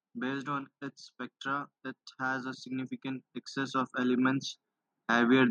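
A speech recording with automatic gain rising from 1.46 to 4.52 s. The level gradually swells by about 9 dB, voice and background together, as the gain control compensates for quiet input.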